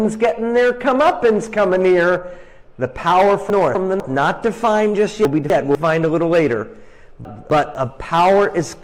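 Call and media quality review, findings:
Jumbled half-second at 3.5–4.0 s, 5.25–5.75 s and 7.25–7.75 s. Chunks out of order: a 250 ms chunk arrives one chunk late and plays after its successor, leaving three hard joins. Likely jitter-buffer or reassembly stage.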